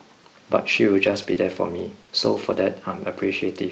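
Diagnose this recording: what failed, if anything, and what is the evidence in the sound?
On the network side, a handful of packets were lost or arrived late between 0.71 and 2.66 s, producing scattered short gaps. There were about four holes, none longer than about 20 ms. The jitter buffer extended the preceding speech over them, so the speech carries brief ticks and small smears.

Further losses in the network hit single packets at 3.22, 3.34, 3.40 and 3.48 s. In each case the lost packet was rebuilt from error correction: Opus decoded the low-bitrate copy carried in the next packet. There is no dropout, but each 20 ms frame sounds rougher and noisier. The Opus call path at 40 kbps caps the audio around 8 kHz.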